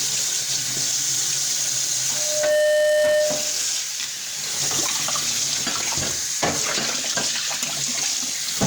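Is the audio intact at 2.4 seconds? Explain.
No. Loudspeaker feedback squeal runs from 2.12 to 3.65 s: a microphone-to-speaker loop exceeds unity gain at 603 Hz, swelling within half a second into a tone a few dB above the sound.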